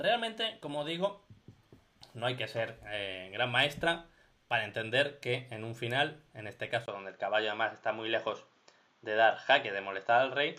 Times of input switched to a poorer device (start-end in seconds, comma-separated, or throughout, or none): 6.86-10.59